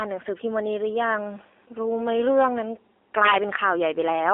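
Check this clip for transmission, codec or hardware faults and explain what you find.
Two faults are present: mobile codec damage across the whole clip, and one burst of integer overflow near the end.

AMR narrowband mobile codec damage runs throughout. The speech is squeezed into a 300 Hz to 3.5 kHz line band. It is coded by a vocal-tract model fed sparse pulses. At this low rate the voice turns buzzy and synthetic. That fits a mode around 7.4 kbps.

Integer overflow hits from 3.25 to 3.35 s. Peaks exceed the integer limit by about 4 dB. Instead of being held at the limit, they wrap to the opposite sign and jump across the full range. This produces violent cracks, far harsher than clipping.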